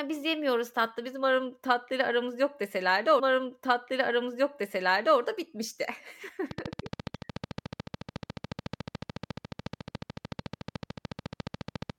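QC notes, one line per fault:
3.18–5.18 s: stream segment repeated. About 2.0 s of speech plays a second time, so the listener hears the same stretch twice in a row. The player fetched or queued one segment of the stream twice and spliced the copy straight after the original. At 3.18 s there is a small blip where playback jumps back to the start of the copied material. The repeat adds roughly two seconds to the running time.
6.51–11.91 s: train of clicks. A steady ticking runs over the speech at 13.9 clicks per second, about 70 in all. The clicks are evenly spaced and share much the same sharp, short shape, so they form a regular rattle rather than random pops. They peak around 10 dB above the speech and stay audible in the pauses. The likely cause is electrical interference from nearby equipment or a faulty connection or power supply injecting repeated pulses.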